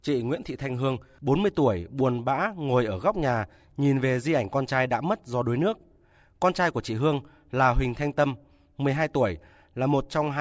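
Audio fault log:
No faults heard anywhere in the recording.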